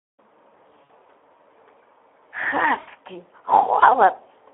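A Speex speech codec running at a low setting, which fits roughly 11 kbps, starves this speech recording of excitation bits. The result is a hoarse, noisy texture throughout, with the sound confined to a telephone band of 300 Hz to 3.4 kHz. VoIP packet loss, concealed by the speech codec, strikes at 0.84–0.92 s and 2.79–2.91 s. About 60 ms and 80 ms of audio go missing, consistent with three and four 20 ms frames. The decoder fills each gap by stretching its last pitch and filter into a buzzy tone or coloured noise that fades, and the sound stays weak briefly afterward.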